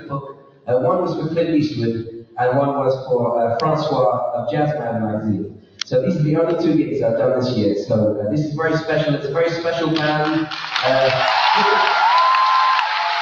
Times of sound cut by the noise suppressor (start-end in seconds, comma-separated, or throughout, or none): 0.00-0.69, 2.03-2.38, 5.42-5.93